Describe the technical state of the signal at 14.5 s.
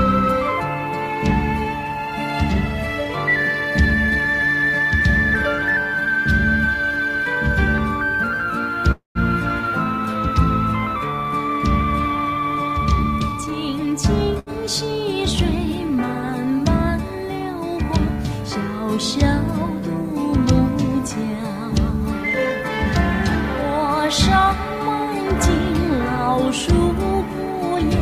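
A short stall from a late packet sits at 14.39 to 14.50 s. A packet arrived late, the jitter buffer ran dry, and the receiver stretched the last sound by about 74 ms before resuming from the same point. Nothing is lost, but the sound is held too long and everything afterward runs 74 ms later.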